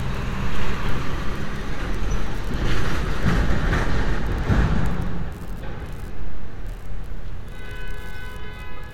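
No technical faults can be heard anywhere in the sound.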